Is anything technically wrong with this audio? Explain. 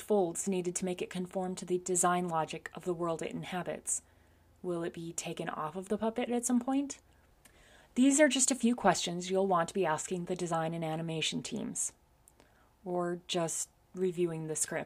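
No, nothing technically wrong turns up anywhere in this audio, so there's nothing here to flag or fix.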